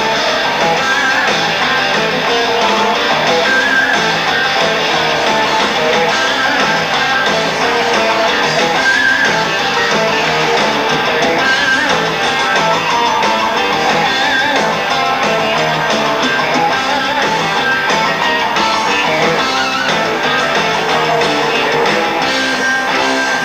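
No technical faults can be heard anywhere in this audio.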